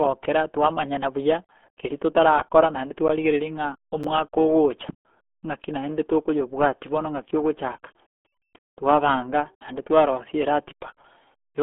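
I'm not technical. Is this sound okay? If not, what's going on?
No. The whole clip has passed through the RealAudio 14.4 codec, an old low-quality format built for dial-up internet. Everything above about 3.7 kHz is gone. That makes the speech sound muffled and gargly, as if heard down a bad phone line.

There are also two blocks of digital silence, at 3.08 s and 4.04 s. For about a hundredth of a second the sound drops to total silence and then snaps back. Each one is heard as a quick tick or click.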